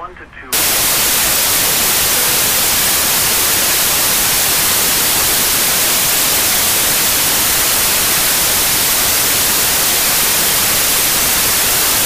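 From 0.53 s to the end, the data are read with the wrong sample width: 16-bit samples are taken as packed 24-bit ones, so each value joins bytes from neighbouring samples and only some carry the true high-order bits. Three bytes are consumed per sample instead of two, so the audio plays 1.5 times too fast and higher in pitch, buried under loud, harsh noise with the original sound inside it.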